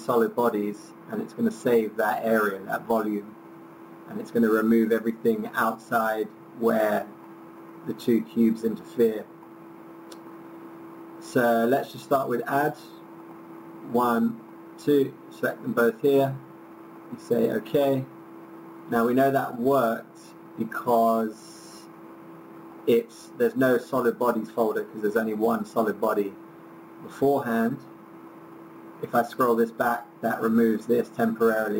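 Imaging from sample-and-hold upsampling runs through the whole clip: the audio appears to have been raised from a 16 kHz rate to 44.1 kHz by holding each sample with no smoothing filter. Mirrored copies of the spectrum sit above the original band, the lowest filling 8 to 16 kHz at about 24 dB below the signal, heard as a bright metallic fizz that tracks the sound's level and moves opposite to its pitch.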